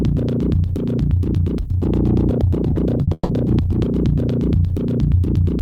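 At 2.73 s and again from 3.03 to 3.09 s the music shows short concealed packet loss. For about 20 ms and then 40 ms no audio reached the decoder in time, and the receiver filled each gap by extending the preceding sound before blending back in. Each one is heard as a brief smear or wobble in the music. On a spectrogram the harmonics turn flat and slightly blurred for a sliver of time, and the waveform loses detail there.

From 3.13 to 3.31 s the sound is replaced by about 160 ms of a continued tone that fades away, followed by roughly 20 ms of near-silence before the music resumes further along. The likely cause is a long network dropout, where the receiver carried the last sound forward until it ran out. On a spectrogram the partials stretch out horizontally and dim to a dark gap. The waveform envelope decays and then jumps back.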